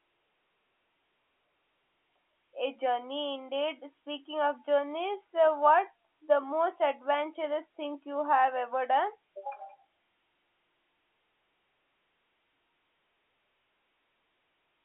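No technical faults occur at any point in this speech, which comes over a G.711 A-law telephone line with nothing above 3.8 kHz.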